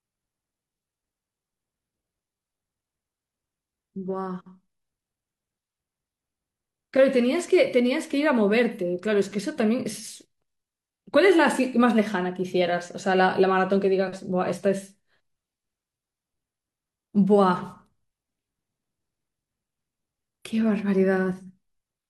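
Listening to the speech recording revealed nothing that stood out as a technical problem.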